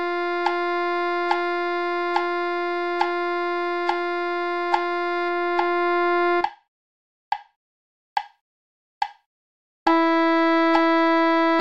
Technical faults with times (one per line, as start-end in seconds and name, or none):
5.29-7.59 de-emphasis applied wrongly